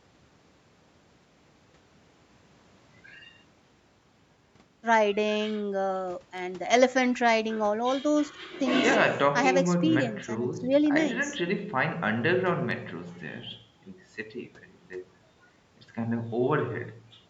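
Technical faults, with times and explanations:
No faults detected; the speech shows normal call microphone processing, with the lowest bass trimmed by its high-pass filter and nothing above 8 kHz.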